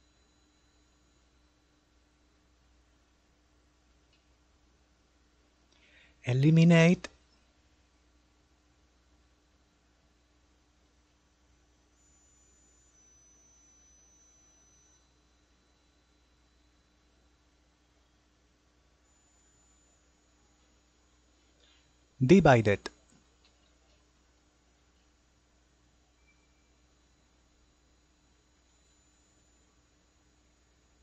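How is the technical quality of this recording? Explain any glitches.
The recording has two stutters caused by repeated frames. At 7.62 to 7.83 s a short 70 ms block of compressed audio plays three extra times, adding about 0.21 s. At 18.83 to 18.97 s the same-length block repeats twice more, adding about 0.14 s. A run of encoded frames was duplicated, so the decoder replays that slice, heard as a rapid stutter. On a spectrogram the identical patch appears side by side.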